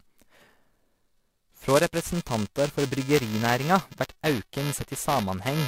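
Right through the speech there's buffer tearing: the writer and the hardware reader have drifted so they cross inside each period, splicing a small sliver of audio roughly 10 ms stale into every buffer. That gives a steady robotic buzz at 375 Hz, which fits a 128-sample buffer.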